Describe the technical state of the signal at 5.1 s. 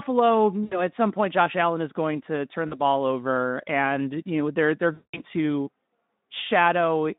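At 5.1 s the signal is inside a stretch of VoIP packet loss concealed by the speech codec, from 4.94 to 5.21 s, pointing to about 200 ms of missing packets. The decoder repeats its last pitch and filter with falling gain, giving a fading buzzy tone or coloured noise: on a spectrogram, smeared flat harmonics or noise dimming; on the waveform, a decaying envelope.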